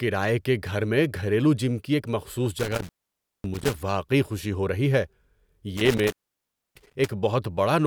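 Speech with an intermittent contact at 2.59–3.74 s and 5.77–7.11 s: a loose cable or plug opens for about 0.55 s and 0.63 s, and crackle marks each break. Unlike a clean digital dropout, each gap leaves faint hiss rather than true silence.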